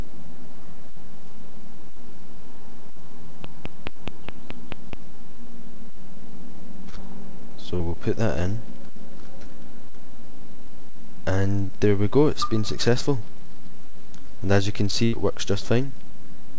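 Audio carried over a call link, with nothing above 8 kHz, which fits a G.722 codec at 64 kbps. From 3.44 to 4.94 s a train of clicks ticks over the sound. About seven clicks come at a regular 4.7 per second, roughly 10 dB above the audio, likely from electrical interference. Short concealed packet loss smears the sound at 7.76 to 7.82 s, a 40 ms gap, and at 9.44, 11.67 and 13.19 s, each 20 ms. The receiver patched these by extending the previous sound. At 15.05 to 15.14 s a burst of packet loss drops about 80 ms. The fill fades as a held buzz or hiss before the audio resumes further on.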